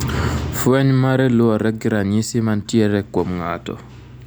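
Nothing in this recording trips the ear as a technical problem, so there's no fault to walk through here.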